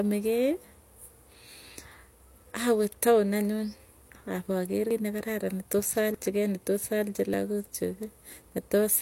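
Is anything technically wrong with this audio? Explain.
Yes. At 4.91 s and again at 6.14 s the speech jumps forward abruptly, and the likely cause is a dropped buffer (overrun): samples weren't read before the hardware overwrote them, so a stretch is lost and the two sides are spliced with no silence. Roughly a tenth of a second disappears at the first point and a few tens of milliseconds at the second. On a waveform each shows as a sudden discontinuity without any gap, and on a spectrogram as a hard vertical seam where the patterns don't line up.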